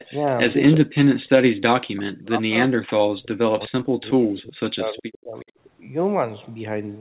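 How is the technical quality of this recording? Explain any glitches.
The recording has two recurring call-processing faults: brief echo leaks and repeated suppression of the talker during double talk. The speech is band-limited to 4 kHz, which fits a narrowband telephone codec such as G.711.

Echo leak, 0.0 to 0.11 s and 5.4 to 5.45 s: A faint delayed copy of speech, lagging about 369 ms, sits roughly 25 dB below the speech at the start and about 35 dB below near 5.4 s. This is likely a far-end echo canceller letting loudspeaker pickup through.

Speech suppressed in double talk, 0.11 to 0.27 s, 0.53 to 1.09 s and 1.95 to 5.46 s: The talker's level drops, by about 10 dB at first and then by as much as 40 dB, cutting out in pieces for around three seconds in the longest stretch. The likely cause is an echo canceller that could not separate overlapping talkers and attenuated both.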